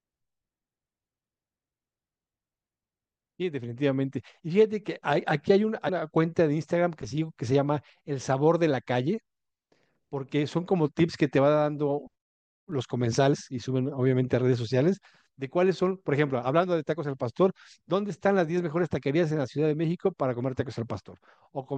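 Speech with damaged data in a compressed stream: brief glitches at 5.88 s and 13.33–13.35 s, where the decoder misread corrupted frames.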